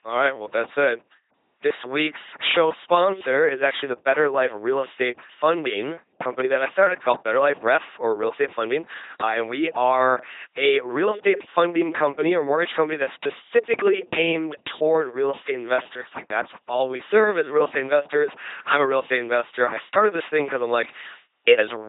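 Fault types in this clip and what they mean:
LPC-10 vocoder: heavily buzzy, robotic speech throughout, every moment forced fully voiced or unvoiced, and nothing above 3.8 kHz, which fits a 2.4 kbit/s link.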